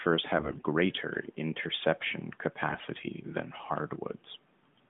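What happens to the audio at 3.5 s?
Nothing goes wrong at 3.5 s: the speech carries on intact through that moment, with only the narrowband character of the AMR-NB mobile codec it passes through.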